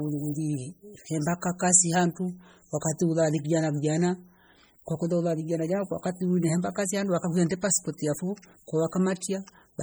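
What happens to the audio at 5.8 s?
At 5.8 s the speech sounds watery and swirly, with metallic chirps on s sounds and smeared onsets, as it does throughout the clip. The likely cause is heavy MP3 compression at a low bitrate, perhaps around 32 kbps, where weak frequency lines switch on and off between frames. That flickering sets it apart from a plain low-pass filter, and the treble still reaches about 21.1 kHz.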